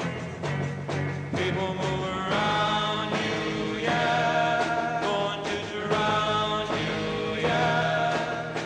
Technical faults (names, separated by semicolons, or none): none